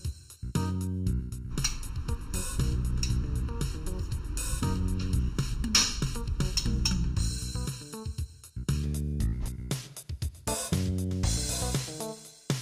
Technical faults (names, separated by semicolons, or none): channel delay (comb filtering)